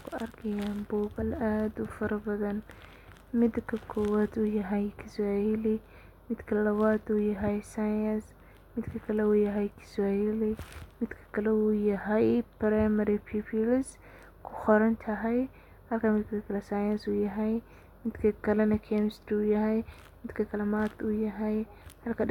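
At 1.21 s and again at 14.65 s the speech is interrupted by a tiny blip, each about 16 ms long. That's damaged data in a compressed stream: a few corrupt bytes throw the decoder off, so it garbles those frames and loses sync before recovering.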